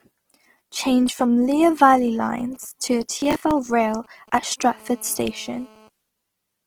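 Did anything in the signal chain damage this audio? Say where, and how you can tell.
Yes. At the codec stage, the whole clip has a grainy, rough texture on the speech, with plainly audible damage but full bandwidth up to 20.4 kHz and no swirly holes. That's likely Opus compression in its CELT music mode, filling starved bands with noise at a low rate around 16 kbps.

Over the air into the analogue wiring, from 1.93 to 4.53 s there's a galloping dit-dit-dit of short buzzes about 30 dB under the speech. Those are GSM signalling bursts: a nearby 2G phone sending occasional bursts at 217 Hz, which the audio circuit rectifies.

At the driver or buffer stage, from 3.2 to 3.67 s a gritty crackle tears across the sound. That's processor overload crackle. The CPU missed a run of deadlines, roughly fifteen over that stretch, on buffers of around 10 ms, and each miss replayed a chunk of stale audio with hard edges.

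A phone then shows up as GSM phone buzz from 4.63 to 5.89 s. It's a steady, raspy 217 Hz buzz with lots of harmonics, about 28 dB below the speech and unrelated to it. That's a call in progress, transmitting 217 bursts a second that the circuit rectifies.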